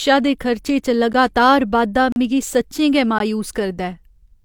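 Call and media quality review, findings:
Gap between stream segments: hard-edged silent holes in the speech at 1.13 s (after "दे खर्चे च", 12 ms), 2.12–2.16 s (37 ms), and 3.19 s (17 ms). The spacing of about 1 s matches 1 s segment boundaries, where mismatched timestamps leave space that the player pads with silence. Unlike packet loss, nothing is cut out; speech resumes exactly where it stopped.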